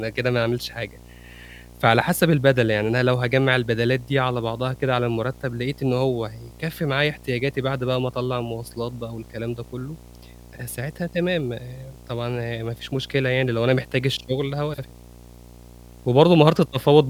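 Video or display buzz runs through the whole clip: a 60 Hz buzz at the picture's field rate, with hash above it, sitting roughly 25 dB below the speech. A screen or video cable is coupling its refresh energy into the audio path.

Frames out of order occur from 14.73 to 14.84 s, where two adjacent blocks of about 48 ms each play in swapped order, which fits pairs of frames decoded in the wrong sequence. The result is a brief garbled flutter, with no time lost.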